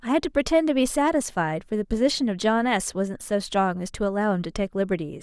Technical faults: none

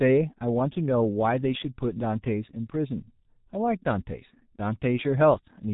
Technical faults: G.723.1 codec

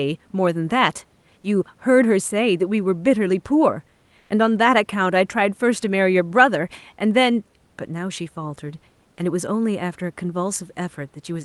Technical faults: comfort noise in place of the background

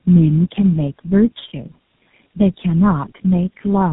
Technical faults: tandem speech coding

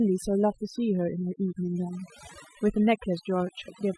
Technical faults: overdone noise removal

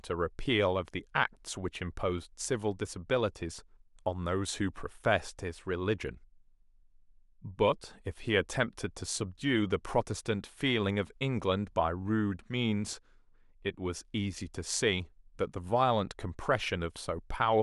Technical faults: none

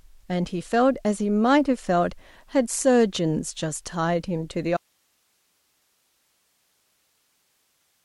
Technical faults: audio dropout to a faint residue

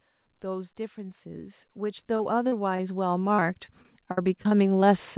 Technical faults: automatic gain rising; repeated packet loss (robotic sound)

